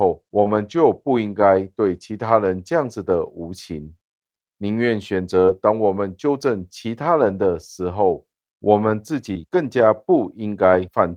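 At 0.43–0.47 s, 5.45–5.50 s and 9.34–9.37 s, short concealed packet loss smears the speech briefly as the decoder extends the previous sound. Unlike error-correction rebuilds, this is guesswork, so consonants can blur.

Each of these ends with a lost packet rebuilt from error correction (0.45–0.47 s, 5.48–5.50 s, 9.35–9.37 s), and a longer 40 ms of rebuilt audio within 7.26–7.32 s fits two separate rebuilt packets. These play rough, noisy real content rather than a smear.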